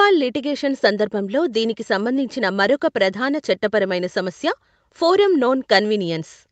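No technical faults are audible.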